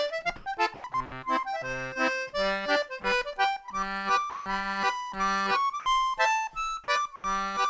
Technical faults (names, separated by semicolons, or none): comfort noise in place of the background; sound chopped by the voice detector; sound dropped by the voice detector; short concealed packet loss